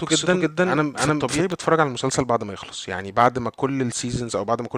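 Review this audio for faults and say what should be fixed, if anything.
The speech is likely being captured twice, with a second, slower path or an out-of-step edit laying a full-band copy of the same audio about 300 ms behind the original. This doubled audio track is already under way when the clip opens and continues to 1.52 s, where the copy stops abruptly. The trailing copy is about as loud as the original and carries no decay or room colour, so the speech is heard again a fraction of a second later, as a clean repeat rather than an echo. To prevent it, route each source through a single capture path and check that edits leave no overlapping duplicate regions.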